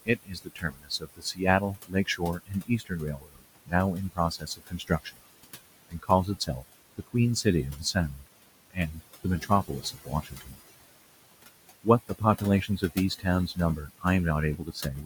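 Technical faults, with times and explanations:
Throughout: noise suppressor artifacts. The suppressor judges each frequency band frame by frame and pulls down whatever it reads as steady noise, so the room noise, about 16 to 17 dB below the speech, dips in pauses and swells back under speech.
0.03–3.73 s, 4.09–11.35 s, 11.75–14.05 s and 14.57–15.06 s: speech cut by the noise suppressor. Within these stretches, roughly 2 s, 3 s, under 1 s and a fraction of a second of quiet speech sound swallowed. The suppressor mistook them for noise and lowered them, by up to about 22 dB, or about 13 dB in the last stretch. These are losses in the speech itself, while the artifacts above are in the background noise.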